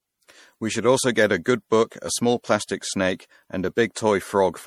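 Speech with generation loss all the way through: swirly, hollow, smeared consonants, likely from being re-encoded as 64 kbit/s MP3 about three times over.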